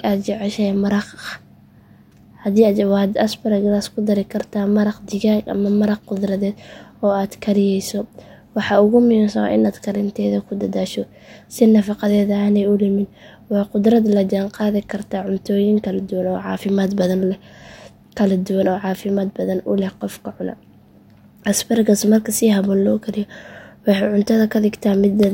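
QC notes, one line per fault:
No fault found.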